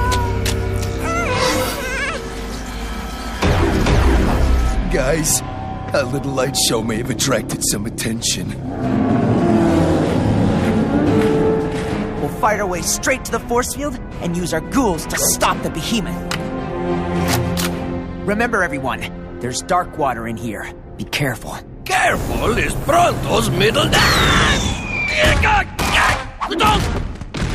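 No technical faults can be heard anywhere in this recording.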